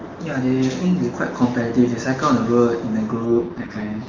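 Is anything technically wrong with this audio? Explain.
Yes. From 3.26 s to the end, the speech turns rough and synthetic. This is an AMR rate drop, consistent with a fall from about 23.85 to 6.6 kbit/s.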